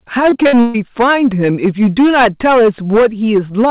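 Hard clipping runs through the whole speech clip. The signal was driven about 12 dB past what one stage could pass, so around a tenth of the samples hit the ceiling and were cut flat. Those squared-off peaks generate harmonics that the original never had, giving a harsh, fuzzy edge on every loud syllable rather than occasional crackle. With content stopping at 4 kHz, which fits a G.711 call path, the distortion lands inside the audible band.

Between 0.30 and 0.76 s, repeated packet loss (robotic sound) breaks up the audio. Several gaps follow one another in quick succession, the longest 132 ms, and over half of that stretch is filled in by stretching the last received sound across each hole. The repeated patches give a choppy, robotic texture, with short pieces of the speech dropping out between them.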